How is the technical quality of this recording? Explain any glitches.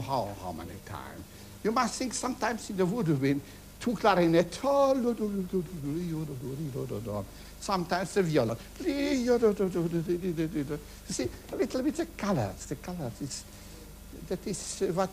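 Nothing to flag: no audible glitches or faults anywhere in the recording.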